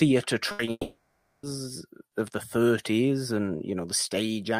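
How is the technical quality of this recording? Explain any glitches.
The technical quality is poor near the start: three network glitches cluster within the first second and a half of this speech recording.

From 0.51 to 0.61 s there is a burst of packet loss. Roughly 80 ms of consecutive audio data failed to arrive in time to be played. The receiver covered the hole by extending the last sound it had and lowering its level as the gap continued. You hear a short held buzz or fading hiss, and then the speech picks up again with that 80 ms missing.

At 0.65 to 0.69 s comes a short concealed packet loss. About 20 ms of audio never reached the decoder. The receiver synthesised a continuation, pitched if the sound was voiced and noise-like if not, and then cross-faded back into the real signal. The result is a brief smear or wobble, and a short consonant at that point may disappear.

From 0.71 to 1.45 s there is a long network dropout, likely caused by an interruption in the connection. 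No usable audio came through for about 0.72 s. The receiver first stretched the last sound into a decaying buzz or hiss for roughly two tenths of a second. After that about 0.52 s of silence remains until the speech returns, with that whole stretch lost.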